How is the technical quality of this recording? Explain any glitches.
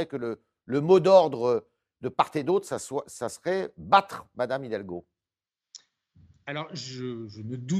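Nothing in this speech recording stands out as a glitch; it sounds steady and free of any audible technical trouble the whole way.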